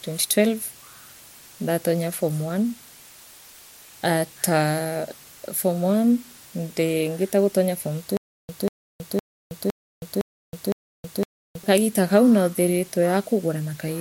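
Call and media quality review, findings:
Constant, even hiss across the whole speech clip, sitting about 25 dB under the signal, with no grinding or distortion. Low bit depth with dither: the signal is quantised to 7 bits with dither added before rounding, so the rounding error becomes steady white noise.

8.17–11.63 s: a 190 ms burst repeats six times, every 511 ms, with 320 ms of dead digital silence between repeats. The audio for that span is lost. Stutter with silent gaps, likely from a stalled player or stream replaying its last fragment on each retry.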